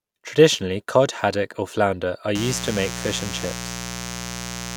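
From 2.35 s, right after "haddock or flounder are", a raspy mains buzz kicks in at 60 Hz, sitting only about 10 dB under the speech through to the end.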